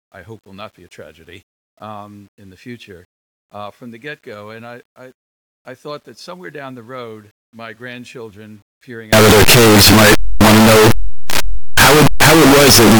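From 9.13 s to the end of the clip, the 8-bit samples were likely read with signed and unsigned mixed up, flipping the top bit of every sample. Each zero crossing of the waveform becomes a leap from one extreme of the range to the other. The speech collapses into loud, harsh, buzzing distortion, and soft sounds come out as loud as strong ones.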